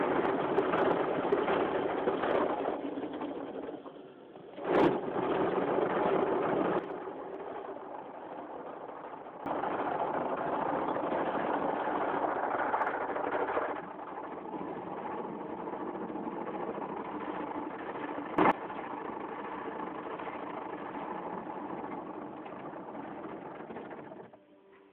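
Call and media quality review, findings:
Level drops abruptly by about 11 dB from 6.79 to 9.46 s, then snaps back, with the background falling and returning together. A brief surge of about 17 dB at 18.38 to 18.52 s. Likely a sudden gain jump in the digital gain stage, applied sample-to-sample without a ramp.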